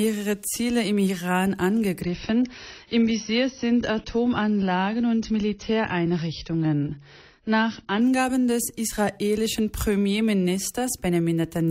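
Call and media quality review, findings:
Adaptive stream at a lower bitrate, 2.01–8.01 s: sudden treble loss above 6.6 kHz, added codec artefacts, no gap. Player dropped to a lower-bitrate rendition after the connection slowed.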